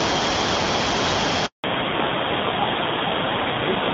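At 1.46 s the call is handed from one network to another, and for 180 ms, until 1.64 s, no speech frames reach the receiver. This handover gap cuts the speech off within a few tens of milliseconds, leaving dead silence until the new link begins delivering audio. Whatever was said during that fifth of a second is gone for good, so the speech resumes mid-flow with a small piece missing.

When the new link comes up at 1.64 s, the call has switched from HD Voice to an older narrowband codec, and it stays that way to the end. Before the switch, the light coding of AMR wideband is consistent with a rate around 12.65 kbit/s. After it, this fallback to narrowband removes everything above 4 kHz, and the rougher texture suggests AMR narrowband at about 7.4 kbit/s. The speech turns duller and more muffled, with sibilants losing their crispness.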